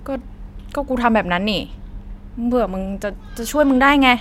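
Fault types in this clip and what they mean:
No faults can be heard anywhere in this recording.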